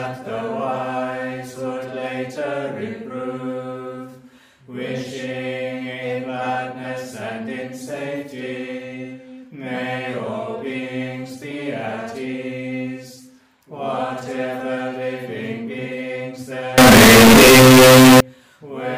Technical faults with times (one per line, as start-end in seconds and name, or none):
16.78-18.20 float read as integer